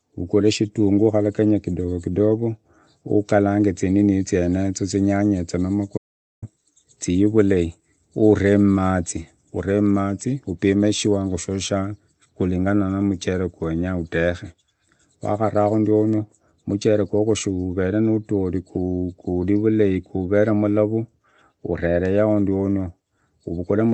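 At 5.98 s the speech cuts off mid-flow into dead silence, with no room tone, and resumes at 6.42 s, so about 0.45 s of content is gone. This audio dropout to silence most likely comes from input briefly lost while the recorder kept writing zeros. The audio is band-limited throughout, consistent with a call codec limited to 8 kHz.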